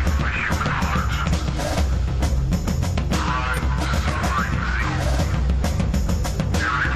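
The decoder drops whole compressed frames three times in this music, at 1.26 to 1.32 s, 3.53 to 3.60 s and 4.79 to 4.85 s, so these are compressed frames skipped. Each time, about two frames go missing, which fits a frame length of 46.4 ms, and the music lurches forward by roughly a tenth of a second.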